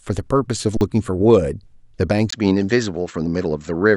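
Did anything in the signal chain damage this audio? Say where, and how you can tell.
Yes. At 0.77 s the speech flatlines for 40 ms until 0.81 s, an underrun with held sample: the output buffer ran dry and the converter sat on its last value. Roughly that much live audio went missing.

From 2.30 s on, the sound goes dull with nothing above 7.7 kHz, after a 20 ms silence, and there's a new noise floor about 50 dB down with no real level change. That's likely the input switched to a poorer device at the driver stage.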